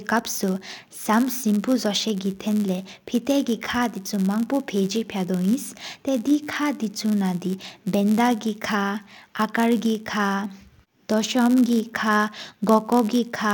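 A block size mismatch (padded) runs through the whole speech clip. One stage hands over shorter blocks than the next stage reads, so each block ends in a short run of zeros. That gives a steady buzz near 100 Hz and slows the speech to 0.996 times normal speed, with the timbre intact.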